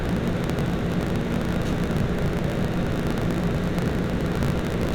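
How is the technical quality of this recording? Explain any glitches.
The quality is poor. A steady low buzz at about 54.4 Hz runs through the whole recording, and everything moves about 1.16 times too fast while keeping roughly its normal pitch. This is a block size mismatch (truncated). One stage writes longer blocks than the next stage reads, which fits 1024-sample blocks, so the tail of every block is discarded. Each cut creates a small discontinuity that repeats at the block rate and produces the buzz. The missing pieces shorten time while keeping the timbre.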